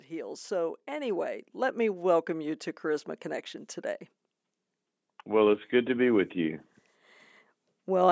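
From 0.08 s to 4.1 s, automatic gain rising lifts the level by about 7 dB as the gain control, judging the input too quiet, turns itself up. The speech and the background noise swell together, whereas a talker simply speaking louder would leave the noise floor unchanged.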